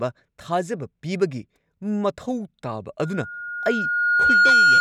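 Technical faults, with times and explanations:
2.99 to 4.80 s, loudspeaker feedback squeal: a pure tone near 1.4 kHz swells over about a second and a half to around 10 dB above the speech. The microphone re-amplifies its own loudspeaker, so that frequency keeps growing. It lasts to the end.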